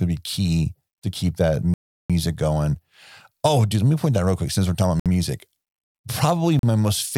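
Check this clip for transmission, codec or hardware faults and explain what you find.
The speech drops out three times, each a short stretch of dead silence that fits a Bluetooth stall. The first runs from 1.74 to 2.10 s, about 0.36 s, right after "key to keep that". The second runs from 5.00 to 5.06 s, after "quick since we're talking", and the third from 6.59 to 6.63 s. The likely cause is radio interference delaying packets until the headphones' buffer emptied, so playback froze and then resumed once retransmissions arrived. The waveform flatlines abruptly, and the spectrogram shows full-height blank columns with hard edges.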